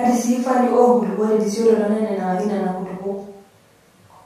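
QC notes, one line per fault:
No faults are heard anywhere in the clip. Nothing in this speech recording calls for a QC entry.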